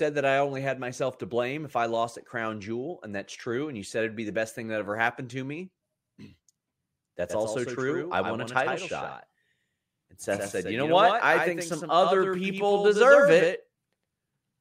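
From 7.29 s to the end, a doubled audio track starts abruptly. A copy about 5 dB quieter trails by about a tenth of a second, likely from a slower capture path, and every spectrogram feature appears twice, offset.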